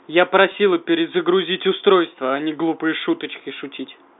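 A brief, slightly held and buzzy moment from 0.52 to 0.54 s is packet loss with pitch repetition: about 20 ms of audio, consistent with a single lost packet, went missing, and the receiver bridged the gap by repeating the last pitch period over the narrow G.711 telephone band.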